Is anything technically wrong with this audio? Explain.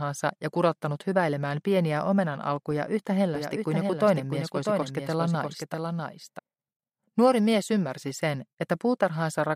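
Yes. A doubled audio track runs from 3.35 to 6.39 s. A second full-band copy, around 5 dB quieter, trails the original by roughly 0.7 seconds, likely from a slower capture path or misaligned edit, producing a dry, distinct echo that starts and stops abruptly.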